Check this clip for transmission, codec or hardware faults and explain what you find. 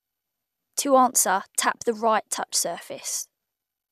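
No transmission, codec or hardware fault can be heard anywhere in this speech recording.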